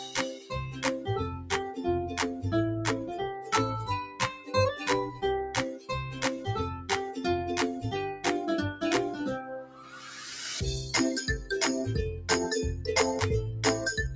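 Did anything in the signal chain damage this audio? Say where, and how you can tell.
Yes. The call processing stage has a speech-tuned noise suppressor left on, so this audio goes through a noise suppressor applied to music or sounds. Across the whole clip the level breathes by around 10 dB: attacks arrive intact while sustained material and tails sag, giving a pumping, thinned texture. A compressor would also duck the attacks. Here only the steady parts drop, which points to the suppressor treating them as noise.

Specific passages show sound cut by the noise suppressor: 0.00–0.52 s (about 13 dB down), 3.34–3.52 s (about 7 dB), 4.05–4.54 s (about 11 dB), 5.08–5.23 s (about 10 dB), 5.71–5.90 s (about 13 dB) and 9.42–10.06 s (about 13 dB). These are not dropouts or packet loss, because steady sound sinks in level or has its decay cut short while sudden sounds mostly come through. The band stops near 8 kHz, as expected from call microphone processing.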